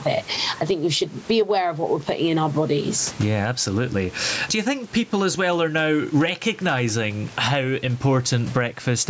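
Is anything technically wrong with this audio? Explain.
Yes. Gain pumping runs through the whole speech clip. The likely cause is an input gain set far too high for the microphone, with a fast limiter or compressor clamping down on every loud syllable and releasing in the pauses. The level swings by something like 15 dB, so loud and quiet passages are squashed toward one flat, breathing level. That room noise sits about 31 dB below the speech, and the call processing cuts everything above 8 kHz.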